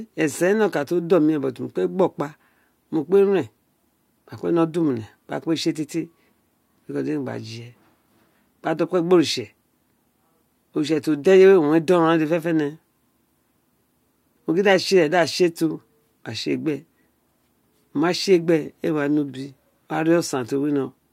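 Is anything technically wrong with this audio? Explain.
No, nothing technically wrong can be heard in this speech recording. No problem stands out anywhere in the clip.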